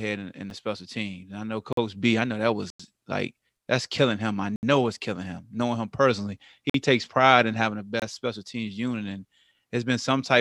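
Blocks of digital silence occur at 0.50 s, 1.73–1.77 s, 2.70–2.80 s, 4.56–4.63 s, 6.70–6.74 s and 8.00–8.02 s. The output buffer likely went unfilled, so the sound cut out. Lengths of about 23, 46 and 93 ms fit 1024-, 2048- and 4096-sample buffers. The shortest block ticks. The longer ones are brief holes.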